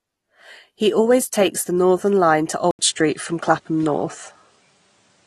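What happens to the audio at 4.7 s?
At 4.7 s the sound is inside an input switched to a poorer device, running from 2.71 s to the end after an 80 ms silence at 2.71 s. Recording likely moved to a narrower-band microphone or headset path, so the sound turns dull or boxy, shifts in level by about 5 dB, and gains new background noise about 45 dB below the signal.

Throughout, including this moment, AAC compression is plainly audible. The codec quantises its frequency lines coarsely, lowering the cut-off and thinning or noise-filling bands, which fits AAC-LC at roughly 32 kbps. This leaves a dull, smeared sound with a warbling or fizzy texture on sustained sounds and sibilants.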